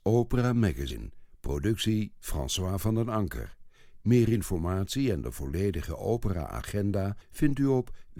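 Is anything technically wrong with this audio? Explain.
Yes, there are compressed frames skipped in two spots of this speech. Around 0.90 to 0.93 s the audio jumps forward by roughly a tenth of a second, and at 3.93 to 3.97 s it jumps by a few tens of milliseconds. Whole coded frames went missing or were rejected as damaged, and those gaps fit runs of about ten and about three 10 ms frames.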